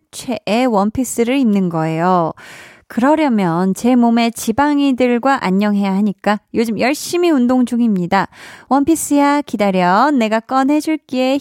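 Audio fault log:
No faults heard anywhere in this speech recording.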